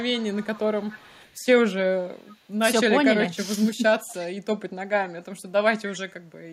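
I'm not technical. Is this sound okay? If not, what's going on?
No. There is an echo leak: a faint, 285 ms late copy of the speech at 0.03–0.61, 0.78–1.45, 2.18–2.36, 4.07–4.15 and 5.92–6.03 s. Likely cause: a speakerphone at the far end whose echo canceller let some of its own playback slip back.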